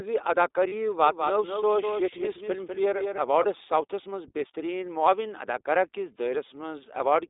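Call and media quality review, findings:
iLBC codec, throughout: speech band-limited to roughly 300 Hz–3.7 kHz, nothing above 4 kHz, plainly rough and synthetic texture. Fits iLBC in its 15.2 kbps, 20 ms frame mode. Unlike a low-bitrate wideband codec, this one leaves no top end at all.

Lost iLBC frames, 0.68–0.74 s: a 40 ms held, slightly buzzy vowel where the sound should move on, consistent with two 20 ms frames concealed. Decoder repeats the last pitch cycle. Not a dropout: no silence, and clean recovery immediately after.

Doubled audio track, 1.06–3.46 s: a second full-band copy about 200 ms behind, about 5 dB quieter. It starts and stops abruptly, with no decay or room colour. Likely a second, slower capture path mixed in. Unlike acoustic echo, there is a single repeat and no tail.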